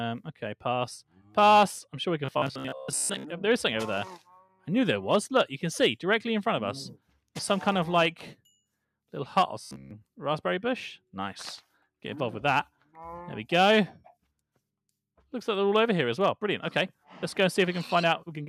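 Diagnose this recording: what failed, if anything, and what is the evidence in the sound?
The sound dips by about 12 dB at 1.09–1.36 s and again at 4.43–4.67 s, sinking for roughly a fifth of a second each time. This is sound cut by the noise suppressor in call processing. It misjudged those passages as noise and attenuated them harder than their surroundings.

A rigid, metallic buzz at 66.7 Hz takes over from 2.26 to 3.25 s, replacing most of that stretch, and all of 9.62–9.92 s. This robotic sound from repeated short buffers likely comes from the driver or buffer stage: starved of new data, it loops a roughly 15 ms block, which fits the 66.7 Hz rate.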